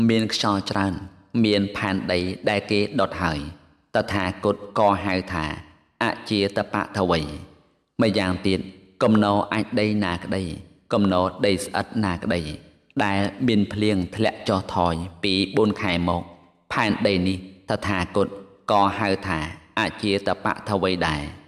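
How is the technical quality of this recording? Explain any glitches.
No glitches turn up anywhere in the recording. There is nothing in it that calls for an explanation.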